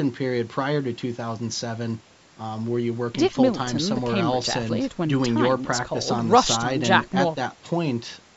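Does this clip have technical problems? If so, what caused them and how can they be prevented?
No, nothing in this speech clip stood out as a technical problem on listening, so there is nothing here that needs preventing.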